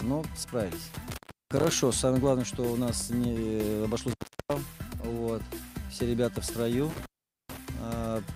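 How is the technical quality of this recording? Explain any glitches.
The recording has three intermittent contact dropouts, at 0.94–1.73 s, 4.09–4.54 s and 6.90–7.58 s. A loose connection briefly opens, cutting the sound for about 340, 360 and 440 ms, leaving faint hiss between crackling edges.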